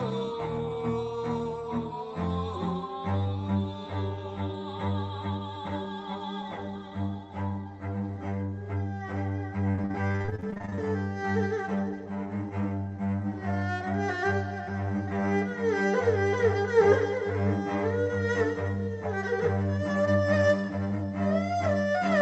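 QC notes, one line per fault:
9.71–10.80 s, repeated packet loss (robotic sound): the audio turns choppy, with small pieces dropping out. Around 20 short gaps arrive in quick succession, the longest about 41 ms, and each is papered over by stretching the last good sound, so roughly 41% of this stretch is concealment rather than real signal. Through the Opus call path the top end stops near 8 kHz.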